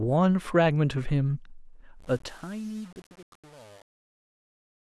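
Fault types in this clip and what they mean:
Truncation distortion on a fade: the fade-out that starts at about 2 s and runs to the end at 4.99 s is processed with too few bits and no dither, so as the speech drops toward the lowest steps the waveform coarsens into blocky stairs. From about 2.0 s on it gets gritty and crunchy, which fits something like 7-bit resolution on the gain stage.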